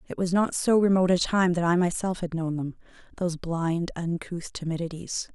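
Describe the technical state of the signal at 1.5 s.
At 1.5 s the speech signal is intact, with no dropout, distortion or other technical fault at that moment.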